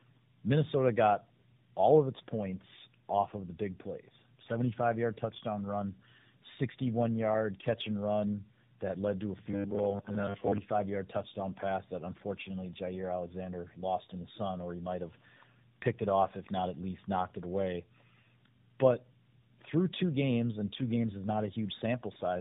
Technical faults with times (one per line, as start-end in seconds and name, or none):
0.00-22.40 tandem speech coding
9.46-10.60 robotic sound from repeated short buffers